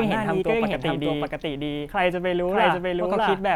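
Throughout the speech, a doubled audio track is heard. A second full-band copy trails the first by roughly 0.7 s, at about the same level. It carries no decay or room colour. The likely cause is a slower second capture path mixed back in.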